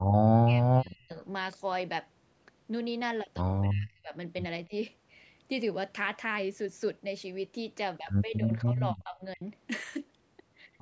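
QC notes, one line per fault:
0.3–1.18 s, 3.65–4.14 s, 4.66–4.73 s and 8.38–9.42 s: speech suppressed in double talk. The speech is pushed down in patches, by up to roughly 40 dB at first, only about 15 dB at 4.7 s. This is likely an echo canceller ducking the near talker while the far side spoke. The depth varies, unlike a clean dropout.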